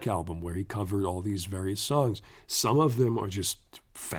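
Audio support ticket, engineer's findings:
No faults found in this speech recording.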